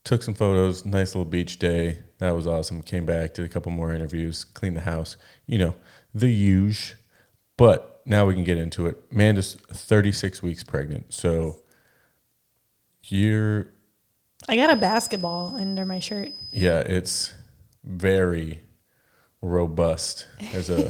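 From 14.57 to 16.78 s, before "it's very", a thin 5 kHz feedback whistle sits quietly under the speech. A loudspeaker-microphone loop is likely.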